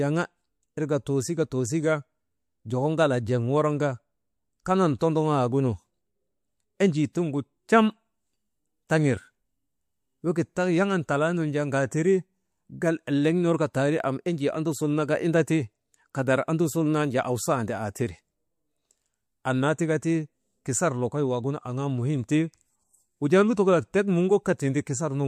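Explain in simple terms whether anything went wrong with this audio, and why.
Two spots have pre-echo: around 4.99 to 5.01 s, and 7.13 to 7.15 s just before "tiŋgu trem". The codec's 36 ms blocks never switched to shorter ones, so noise meant for each sharp attack leaked about 20 ms earlier, giving a brief hiss and a softened hit.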